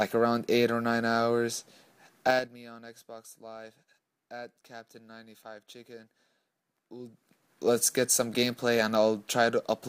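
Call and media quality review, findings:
Zipper noise: ticking over level drops at 2.22–2.56 s (5 dB steps, about 20 dB down) and rises at 6.91–7.77 s (2 dB steps, about 20 dB up). Gain stage steps roughly ten times a second, unsmoothed.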